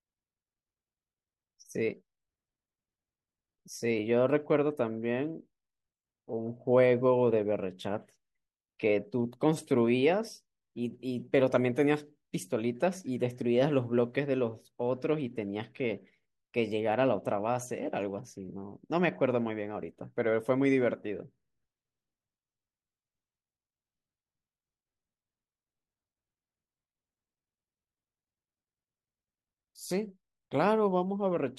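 Nothing in this speech recording stands out as a technical fault; it runs along without any glitch, dropout or distortion worth pointing to.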